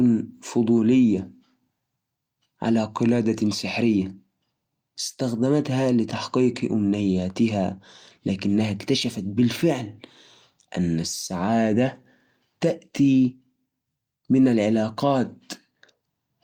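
No technical faults are audible.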